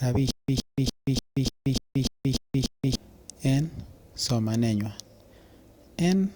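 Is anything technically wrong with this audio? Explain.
Yes. From 0.31 s to 2.95 s the speech breaks into a stutter with silent gaps: the same 117 ms fragment plays nine times, each followed by about 178 ms of dead silence, repeating every 294 ms. This is likely a stalled player or stream replaying its last fragment at each retry and then running empty, so the speech meant for that span is lost. A waveform shows identical bursts separated by flat silent gaps; a spectrogram shows repeated blocks divided by blank columns.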